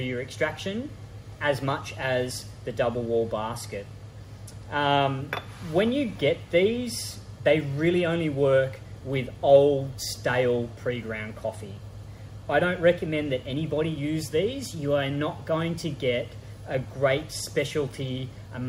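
No technical faults can be heard at any point, so there are none to describe.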